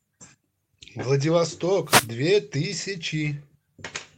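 A wireless microphone noise hit runs from 1.84 to 2.10 s: the radio signal faded through reflection cancellation, letting receiver noise surge as a brief swish of static over the speech.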